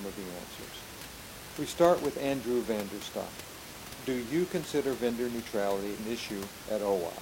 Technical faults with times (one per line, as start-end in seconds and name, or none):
5.95-6.00 damaged data in a compressed stream